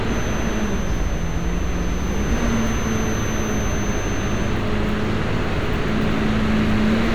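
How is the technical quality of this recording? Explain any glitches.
There's one clear problem here: a feedback whistle sitting behind the sound from the start until 4.63 s. It's a thin, steady tone at 6.2 kHz, roughly 20 dB below the main audio, swelling and fading slowly in level. That's likely a speaker-to-mic loop hovering right at the edge of feedback, ringing on one frequency without running away.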